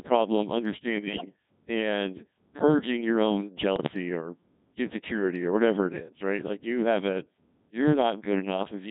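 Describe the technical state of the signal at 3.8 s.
At 3.8 s the signal sits inside a burst of bit errors on digital voice radio. The burst runs from 3.76 to 3.94 s. Corrupted bits reached the decoder, and each one helps set a whole frame's pitch, level, voicing or spectrum. The span of the damage points to about three frames being hit, at an error rate of around 7 percent. Pitch, loudness and tone colour jump abruptly. The speech breaks into warbling, bleepy robotic gibberish.

Underneath, the whole clip passes through the Codec 2 vocoder. The heavy smearing fits a rate near 1.6 kbit/s. Only pitch, voicing, energy and a spectral envelope survive. The decoder rebuilds the speech from sine waves, so the original waveform is gone. The result sounds buzzy and robotic throughout. At 3.8 s this synthetic texture is what the bit errors scramble.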